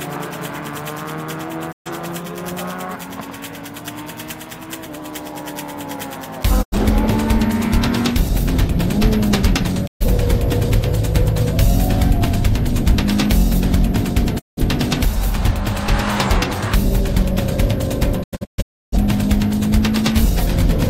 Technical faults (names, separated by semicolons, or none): digital broadcast dropout